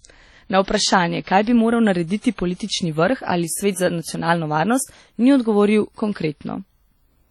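A speech recording that sounds heavily coded throughout: ringing, washy, with a hiss that breathes along with the voice and thin patches where quieter detail drops out. That's most likely WMA compression at a low bitrate, roughly in 32 kbps territory. You can also hear pre-echo, a short hiss smearing in ahead of sharp attacks, at 0.64 to 0.68 s and 2.20 to 2.24 s (about 40 ms each), and at 2.55 to 2.60 s (about 49 ms), just before "vrh ali svet za". The codec's noise is spread across the whole transform block, so it leaks into the quiet moment before each onset and softens it.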